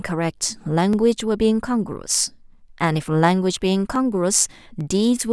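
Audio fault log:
0.93 s, 3.96 s, 4.81 s: dropped samples. The stream likely lost a tiny run of samples at each point, well under a millisecond each time, so the waveform leaps straight from one value to a later one with nothing in between. That sudden step is far too brief to remove any of the speech, but it lands as a single sharp click at each of the three moments, a thin vertical line across the spectrum.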